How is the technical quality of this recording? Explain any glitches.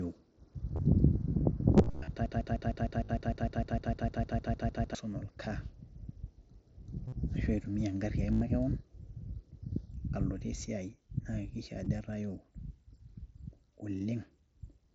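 The recording is marred by two kinds of fault: a long repeating loop and several dropouts hidden by the headset link, heard over the mSBC headset codec with its 8 kHz speech band and light graininess on loud sounds.

The broken-record loop runs from 2.26 to 4.95 s. A 152 ms fragment plays back to back about 18 times, a mechanical stutter lasting over two seconds, and the speech meant for that stretch is gone. The likely cause is a stalled stream resending its last buffered piece.

Concealed Bluetooth headset packet loss occurs at 0.76 to 0.79 s, 1.77 to 2.08 s, 3.05 to 3.09 s, 7.08 to 7.12 s, 8.32 to 8.41 s and 11.85 s. Lost packets were filled with repeats of the last few milliseconds. The brief gaps are nearly inaudible, while the longer runs, especially around 8.3 s, buzz briefly before a slight warble.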